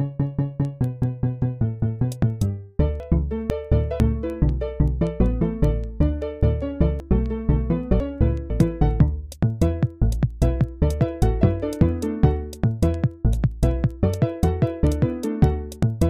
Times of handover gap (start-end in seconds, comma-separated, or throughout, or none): none